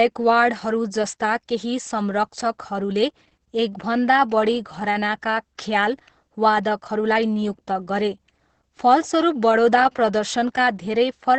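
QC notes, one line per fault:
Throughout: Opus voice compression. Nothing above 8.6 kHz, and coarse excitation coding leaves the speech hoarse and slightly robotic, which fits SILK near 10 kbps rather than plain low-pass filtering.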